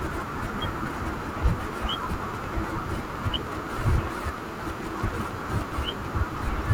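From 1.43 s to 5.93 s, a train of clicks runs over the speech: sharp, near-identical pulses arriving at a steady 9.8 per second, about fifty in all, ticking on through the pauses and peaking somewhere around 10 dB above the speech. The likely cause is interference from nearby equipment or a faulty connection or power supply injecting pulses. Unlike random crackle, whose pops vary in size and timing, these repeat with the same shape at an even, clock-like rhythm.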